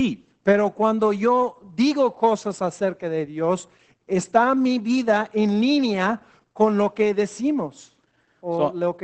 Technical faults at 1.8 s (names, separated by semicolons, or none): Opus voice compression